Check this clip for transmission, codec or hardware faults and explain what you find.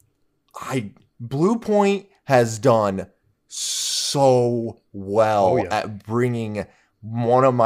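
No faults can be heard anywhere in the recording. Nothing in the speech calls for comment on technical grounds.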